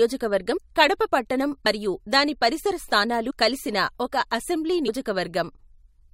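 Brief smeared blips with small forward jumps occur at 0.56–0.58 s before "కడప పట్టణం మరియు దాని", at 1.65 s after "కడప పట్టణం", and at 3.29–3.31 s before "కలిసిన ఒక అసెంబ్లీ". These are compressed frames skipped: about 150, 70 and 100 ms of audio are dropped, in whole steps that fit 21.3 ms frames.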